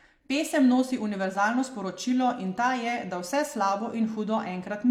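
Nothing in this short speech recording stood out as a technical problem on listening.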